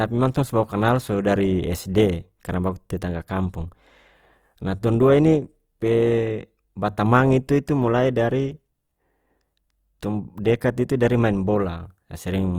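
Throughout the speech, the sound is rough and grainy, with a plainly audible noisy haze, though the bandwidth stays wide, reaching about 20.3 kHz. This is likely Opus compression in its music mode at a rate fitting 24 kbps, filling bit-starved bands with folded or noise energy.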